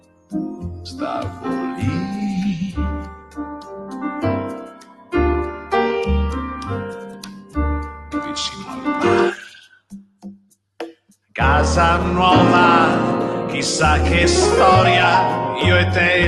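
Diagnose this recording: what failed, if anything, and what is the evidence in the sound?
Call processing is at fault. A noise suppressor designed for speech was left active on non-speech sound, producing a noise suppressor applied to music or sounds fault across the whole clip. The suppressor treats steady tones, ambience and reverberant tails as noise and keeps pulling its gain down, then releasing it when a transient arrives. The result is level swings of about 15 dB, heard as pumping and thinning, with attacks passing through and sustained material sinking. The top end stopping near 12 kHz fits the Opus call path rather than this fault.

The evidence is in specific spans where sound is cut by the noise suppressor. The cuts fall at 0.0–1.45 s (deepest drop about 19 dB), 3.03–5.14 s (about 17 dB), 5.5–5.72 s (about 9 dB), 6.47–8.87 s (about 15 dB) and 9.35–11.35 s (about 19 dB). Within each span the held or decaying portions duck well below the surrounding level or have their decay truncated, while onsets stay largely intact. 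That pattern is a gain mask keyed to stationarity, not a level fault upstream.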